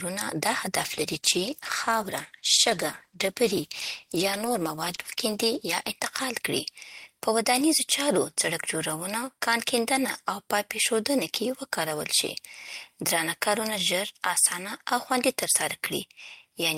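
Speech, with a call bitrate drop from 0.81 s to 5.99 s. The sound turns rough and watery, and the top end goes dull and muffled. The change fits the encoder being told to fall from about 40 kbps to about 13 kbps. The call's bandwidth estimate fell, so fewer bits were available. At that rate the codec quantises more coarsely and trims the high frequencies. The degraded stretch holds for about 5.1 s before the bitrate recovers.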